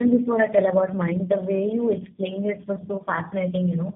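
It's a speech clip with tandem speech coding running the whole way through: the sound is rough, muffled and warbly, with nothing above 3.5 kHz. That points to three low-rate coders in a row, something like GSM full rate then G.729A twice, each recoding the previous one's damage.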